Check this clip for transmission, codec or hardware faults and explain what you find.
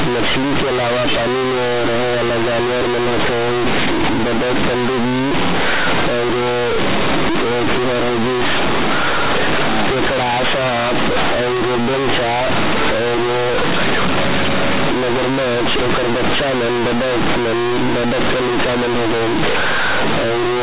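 There is one fault, running the whole length of the speech, on top of mu-law G.711 telephone coding that is itself working normally and passes nothing above 4 kHz.

Companded audio read as linear, throughout: unexpanded mu-law bytes play as 8-bit samples, giving loud buzzy distortion, noisy pauses, and a waveform bent out of shape.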